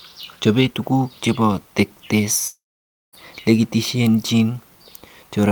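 Speech clip with a long network dropout from 2.47 to 3.15 s: the sound smears into a fading buzz, then falls nearly silent for about 0.55 s, and about 0.66 s of audio is lost, likely from a network outage.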